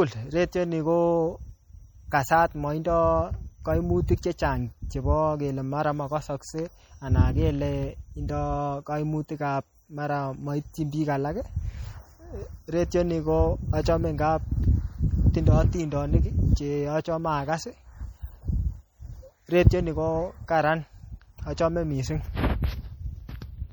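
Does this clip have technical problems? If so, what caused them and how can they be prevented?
Yes. All the way through, the speech has a watery, swirly quality with a dulled top end, and the s sounds come out chirpy and metallic. That's likely MP3 compression at a low bitrate; the damage fits something around 48 kbps. Starved of bits, the encoder chops off the treble above a fixed point and drops quieter frequency components, which flicker in and out between frames, and that flicker is the swirl you hear. To prevent it, keep a lossless master and encode at a higher bitrate, or use a more efficient codec if the file has to be small.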